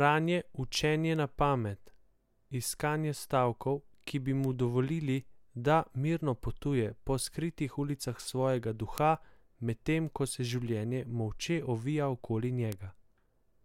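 A speech recording carrying four isolated, sharp ticks at 1.16, 4.44, 8.98 and 12.72 s. Each is a single broadband click that has nothing to do with the voice, peaking at about -32, -20, -8 and -14 dBFS respectively. The loudest is at 8.98 s. These are bit error spikes: a flipped bit in storage or on a digital link throws one sample, or two at 1.16 s, off by a power of two before the waveform snaps back.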